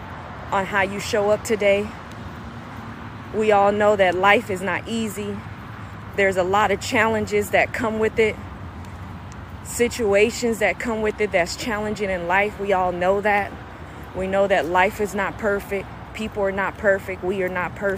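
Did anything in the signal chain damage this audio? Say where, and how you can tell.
No, nothing audible in the clip points to damage at any stage of the chain.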